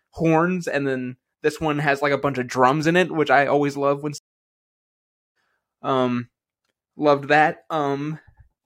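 Right after "I always love when", a stream reconnect silences the speech from 4.18 to 5.36 s while the broken connection is re-established and a fresh decoder starts mid-stream. Unlike a simple dropout, the speech resumes roughly a second and a half further along, so material is skipped.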